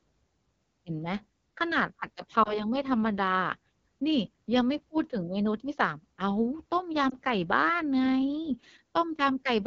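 From the start, the speech carries the sound of the AMR wideband (HD Voice) codec working near the bottom of its range. The rough, raspy texture fits the 8.85 kbit/s mode. In that mode, the pulse excitation and vocal tract model cannot track the voice closely below 6.4 kHz. The band from 6.4 to 7 kHz is filled with shaped noise rather than real detail, which gives the top end a hissy, synthetic quality.

At 2.43 to 2.59 s there is a lost AMR speech frame. The sound briefly dips and warbles, which points to a single 20 ms frame failing its checksum. The decoder then repeated the previous pitch and vocal tract settings at reduced gain and recovered slightly rough. The same fault recurs at 7.10 to 7.15 s as a shorter dip, again consistent with one concealed frame.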